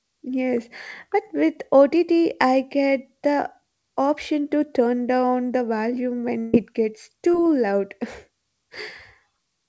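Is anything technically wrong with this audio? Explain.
Yes, the speech has two packet-loss faults, heard over a call path whose G.722 coding leaves nothing above 8 kHz.

From 6.40 to 6.55 s, just after "turn down the volume", there is a burst of packet loss. About 140 ms never arrived, so the receiver stretched the last sound for roughly 134 ms, fading it out before jumping ahead. Unlike a brief concealment, this long fade leaves a stretch of the speech missing.

From 7.31 to 7.35 s, a short concealed packet loss patches about 20 ms with extrapolated sound that blends back quickly. It comes across as a momentary smear or wobble rather than a fading buzz.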